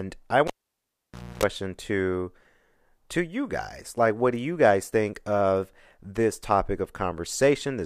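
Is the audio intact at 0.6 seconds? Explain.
No. At 0.6 s you're in the middle of a cable pulled and plugged in, running from about 0.47 to 1.43 s. A pop marks the cable coming out, then the signal drops to near silence for roughly 0.91 s. As the plug goes back in, the tip touches first and picks up about 0.28 s of 60 Hz mains buzz, and a second pop follows when the speech comes back.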